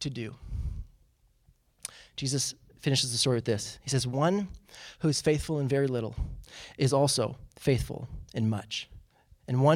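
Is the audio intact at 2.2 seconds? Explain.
Yes, at 2.2 seconds the speech is intact, with no fault at that moment.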